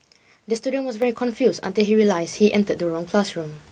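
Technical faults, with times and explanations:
1.02 s: microphone volume stepped up. Voice and background jump together by about 6 dB at once, unlike a gradual gain ramp or a louder talker alone.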